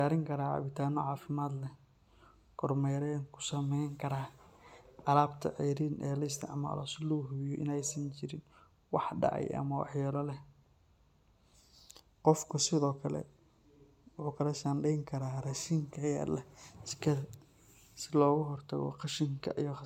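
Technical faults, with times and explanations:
throughout, generation loss: swirly, hollow, smeared speech with blurred attacks, likely from about five MP3 re-encodes near 128 kbit/s, each pass stacking fresh quantising damage.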